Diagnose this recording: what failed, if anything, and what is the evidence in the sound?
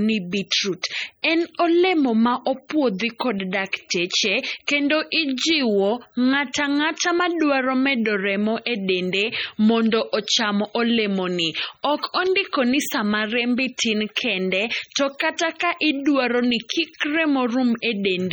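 Codec stage: heavy MP3 compression throughout the speech, likely from a low-bitrate encode; the sound points to around 32 kbps. Weak spectral lines flicker on and off frame to frame, giving a watery swirl and chirpy sibilants. A plain low-pass filter wouldn't flicker, and content still reaches 20.7 kHz.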